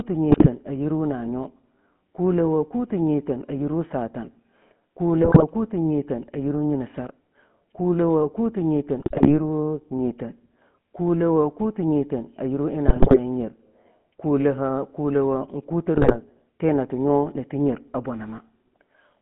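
The speech has a buzzy, gravelly roughness from start to finish, with nothing above 3.4 kHz and little below 150 Hz. That points to the GSM full-rate codec at 13 kbit/s, which rebuilds the voice from a vocal-tract model driven by coarse, regularly spaced pulses.

Five short bursts of squawking, popping and gargling break through at 0.30–0.49 s, 5.22–5.43 s, 9.00–9.37 s, 12.88–13.17 s and 15.96–16.17 s. The one at 12.88 s is the harshest. These are GSM bit errors: corrupted filter, pitch and gain values distort the spectrum and level for a run of frames.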